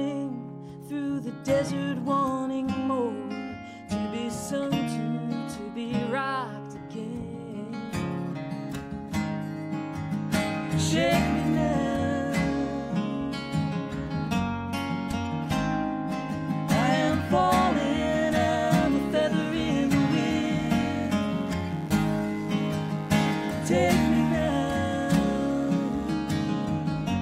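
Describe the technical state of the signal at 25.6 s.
At 25.6 s the signal carries mains buzz, which runs from 19.09 s to 26.14 s. Sharp switching spikes from the 50 Hz supply leak into the audio path twice per cycle. That puts a dense stack of harmonics of 50 Hz on the sound, reaching up into the kilohertz range. The result is a steady, raspy buzz under the sound. It sits well below the main signal, at about 30 dB down.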